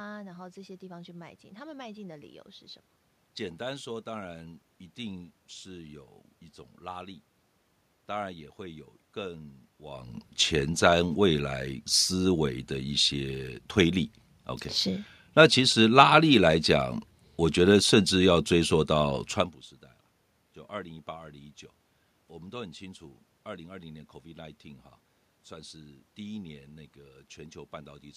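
Nothing stood out on listening; the background noise of the room and the talker's level changing around 10 seconds and again near 19.5 seconds are part of the recording itself.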